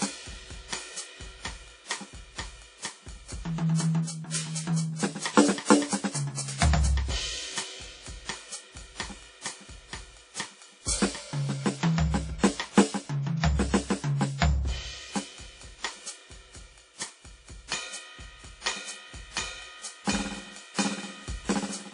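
WMA compression damage runs through the whole music clip, from start to finish. Nothing is present above about 10.1 kHz, and the plainly audible smearing, ringing and breathing hiss point to a low bitrate around 32 kbps. The likely cause is a transform codec of the Windows Media Audio kind working on long blocks, so quantisation noise spreads across tens of milliseconds around each sound while weaker spectral lines are dropped altogether.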